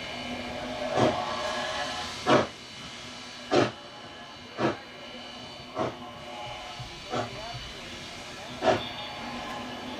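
No technical faults can be heard anywhere in the audio; the signal stays continuous and stable throughout.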